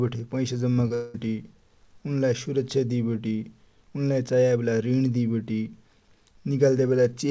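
At 0.74 s and again at 0.88 s, short concealed packet loss leaves two brief smears in the speech. Each time about 20 ms of audio arrived too late to decode, and the receiver bridged the gap by extending the preceding sound before blending back in.

From 0.94 to 1.16 s the speech turns into a synthetic continuation, a buzz or hiss that fades, lasting about 0.2 s, with no silence, and then resumes with that stretch missing. This is likely a long network dropout that the concealment covered for its full length. All of this sits on a call-codec path with nothing above 8 kHz.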